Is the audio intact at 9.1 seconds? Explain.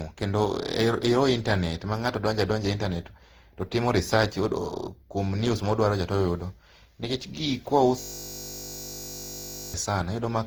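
No. From 8.00 to 9.74 s a system hang loop is under way: the machine stalled while the sound hardware kept replaying one 20 ms slice of its buffer, so 9.1 s is a steady buzz at 50 Hz. Unlike a dropout or a glitchy stutter, the repeats are identical and come fast enough to fuse into a pitch. Under the buzz, the whole clip also shows generation loss. The swirl, hollowness and smeared attacks go beyond what a single low-bitrate pass would give, which points to the likely cause: re-encoding around seven times with a codec in the range of Opus at 48 kbit/s, each pass adding fresh quantisation damage.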